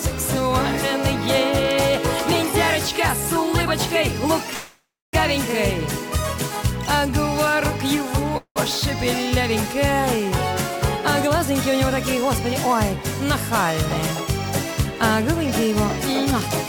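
Packets were likely held up in transit so the jitter buffer ran dry, producing two call audio freezes: at 4.53 to 5.15 s the sound stalls into a fading buzz then silence, and briefly again at 8.37 to 8.58 s, each time resuming where it left off.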